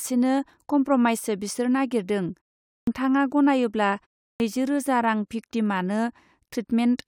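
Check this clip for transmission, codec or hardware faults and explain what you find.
Two instances of a clipped start after a pause. At 2.76 s, after "कमप्रमाइसो बिसोर नागरिदों" and a 0.43 s pause, about 113 ms is lost. At 4.30 s, after a 0.32 s pause, about 100 ms is lost before "रोजा रां भिक्तिमानो". The output path idles during the silence and needs time to wake, so speech resumes abruptly without its first sounds. The muted pauses themselves cost no speech.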